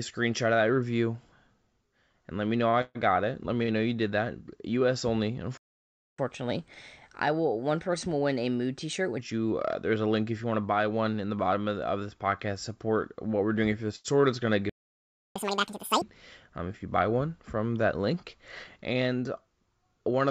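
At 2.70 s a short stall from a late packet holds the sound for about 35 ms. A packet arrived late and the jitter buffer ran dry. The receiver stretched the last sound, giving a brief buzzy hold. Nothing is lost.

From 2.81 to 2.97 s comes a call audio freeze. The sound turns into a fading buzz for 136 ms without going silent. Packets were likely delayed in transit, so the receiver filled the wait. It resumes where it stopped.

A second short stall from a late packet falls at 3.63 to 3.70 s, with 52 ms of stretched sound.

From 5.57 to 6.19 s there is a playback stall. The audio cuts out for about 0.61 s in mid-flow. The player likely ran out of data or was blocked. It then continues where it left off.

Catch-up at higher speed follows from 6.19 to 9.19 s, ending just before "you uh there's a". The backlog plays 1.15 times fast, raised about two semitones. It sounds slightly quick and high, then settles.

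At 13.96 to 14.06 s another short stall from a late packet holds the sound for 86 ms.

A second playback stall runs from 14.69 to 15.36 s. This is about 0.66 s of silence, likely from the player starving again.

Catch-up at higher speed follows right after "is going to", from 15.36 to 16.02 s. Playback runs at double speed, about ten semitones up. It sounds squeaky and rushed before snapping back.

From 16.48 to 16.97 s a jitter buffer speed-up runs the audio at 108 percent, ending just before "one from that link". The buffer held too much audio. Short pitch-period pieces, roughly 50 ms in total, were cut out. The passage sounds hurried but keeps its pitch.

Throughout, the band stops at about 7 kHz, which fits the G.722 call codec at 64 kbps.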